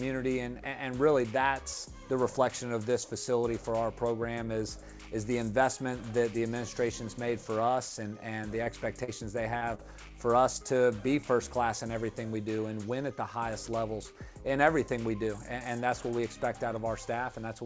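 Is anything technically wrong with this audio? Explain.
Yes. Short concealed packet loss occurs at 8.64, 9.04, 9.58 and 9.75 s. Each time, 20 to 40 ms of audio missed the decoder's deadline. The receiver stretched the preceding sound across the gap and faded back into the real signal, leaving a brief smear or wobble. Through the call path, nothing is heard above 8 kHz, which fits a G.722 call codec.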